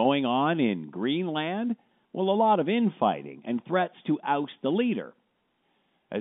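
No technical faults can be heard anywhere in the speech. The telephone path comes through as G.711 coding would, with the sound confined to a band of roughly 200 Hz to 3.6 kHz.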